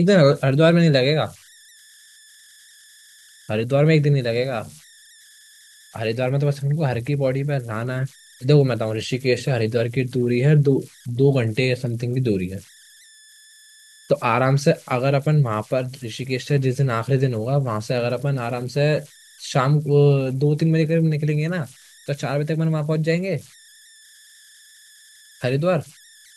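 From start to finish there are converter idle tones riding along with the speech. A whistle, somewhere around 2 kHz, sits about 29 dB below the talking, and it's easiest to catch in the pauses. Under the quieter stretches it turns into a grainy hiss. What's happening is a delta-sigma converter running without dither: with low-level input it locks into repeating bit patterns, and those cycles come out as tones whose pitch follows the input's offset.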